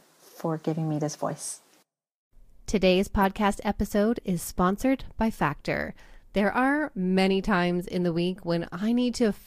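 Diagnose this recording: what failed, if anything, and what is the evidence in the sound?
The failure sits in the codec stage: a corrupt frame was decoded. One compressed frame arrived with damaged bits, and the decoder played it rather than concealing it. The misread gains and codes put energy at the wrong frequencies for that single frame. The result is a brief, out-of-place blip at 3.22 s, peaking around -20 dBFS, just before "episode is sponsored by". Its frame-length duration and spectral wrongness mark it as decoder output, not an acoustic event.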